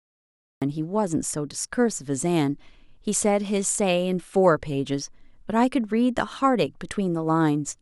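The first 0.62 s is dead digital silence, and then the speech bursts in at 0.62 s already mid-sound, with no natural onset or fade-in. This is a cut-off start: capture or streaming began late, so the opening of that utterance was never recorded.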